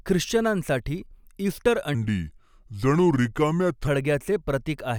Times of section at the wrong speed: 1.95-3.87

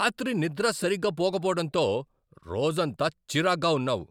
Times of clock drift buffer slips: none

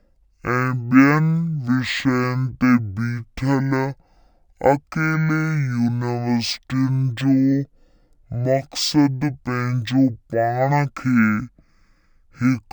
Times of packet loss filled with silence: none

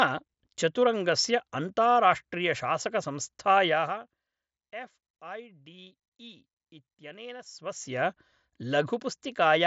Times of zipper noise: 7.42-8.02

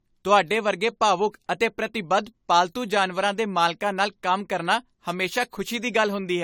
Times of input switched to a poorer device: none

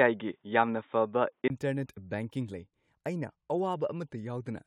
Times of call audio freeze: none

